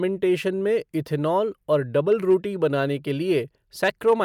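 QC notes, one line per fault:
2.12–2.35 s, hard clipping: peaks overdriven by about 2 dB are cut flat just before "बनाने के", giving brief crackle only on peaks, unlike soft clipping's rounded, warmer distortion.
3.84–4.22 s, hard clipping: the same mild overload of about 2 dB squares off loud peaks near the end, adding high harmonics heard as crackle rather than continuous fuzz.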